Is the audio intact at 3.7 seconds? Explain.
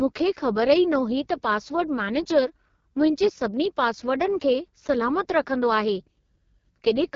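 No. At 3.7 seconds the speech sounds rough and raspy, with a buzzy, grainy edge and nothing above about 7.4 kHz, and this damage runs through the whole clip rather than a single moment. This is the AMR wideband (HD Voice) codec working at its lowest rate: it models the voice as pulses through a vocal tract filter, and with so few bits it can't track the voice finely. That heavy coarseness fits the 6.6 kbit/s mode.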